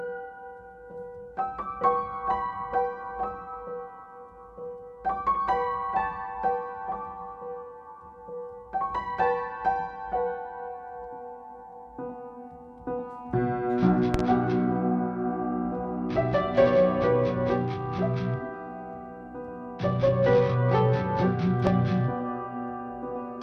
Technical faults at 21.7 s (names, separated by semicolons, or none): loud pop